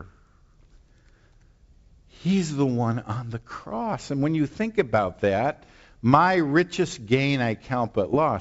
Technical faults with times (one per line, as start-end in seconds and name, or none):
8.13-8.17 bit errors on an ADPCM link